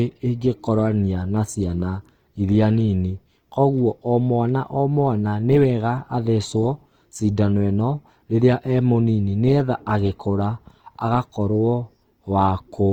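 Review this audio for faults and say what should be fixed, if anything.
Throughout the speech, the texture is grainy and rough rather than swirly like MP3, and the highs still reach about 20.2 kHz. This is likely Opus compression in CELT mode, at a grain level that points to about 24 kbps. Encoding at a higher bitrate would prevent it.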